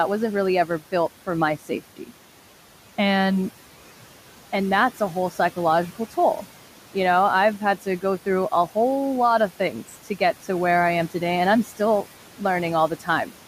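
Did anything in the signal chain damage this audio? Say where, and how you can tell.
Yes. Noise suppressor artifacts come from call processing: the room noise sits about 18 dB under the speech and dips by about 12 dB between phrases. Its level shifts frame by frame, sinking between words and rising under them, which sets it apart from steady codec noise.

Speech cut by the noise suppressor, also in call processing: from 1.69 to 2.11 s, right after "for my", a tenth of a second or so of quiet speech drops by up to about 12 dB and sounds swallowed. That isn't a dropout, since the background ducks along with it.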